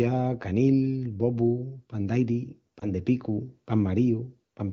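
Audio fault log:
2.79 to 2.90 s, lost AMR speech frames: right after "pan d'airi" there's a brief dip or warble, which fits a single dropped 20 ms frame. The decoder bridges it by reusing the last pitch and vocal tract settings at lowered gain, then the wideband speech recovers.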